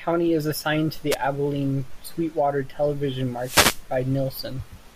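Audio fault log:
1.11–1.16 s and 3.38–3.84 s, wireless microphone noise hit: the radio link from an analogue FM microphone fades as reflected signals cancel, so receiver hiss swells into a static swish, brief just after "is assigned to the", longer later. Unlike a digital dropout, noise fills the gap rather than silence.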